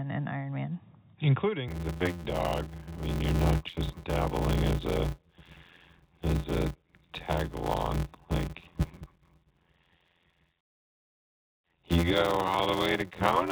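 A speech clip where, from about 1.68 s to the end, there's a steady buzz at around 86 Hz and everything drags along at roughly 0.625 times normal speed, though the timbre stays about where it should be. That's a block size mismatch (padded): one stage hands over shorter blocks than the next one reads, which fits a 512-sample read, and the shortfall gets zero-filled. Those little silent gaps in every block produce the buzz and stretch the timing. The narrowband top end, with nothing above 4 kHz, comes from the G.711 mu-law call path.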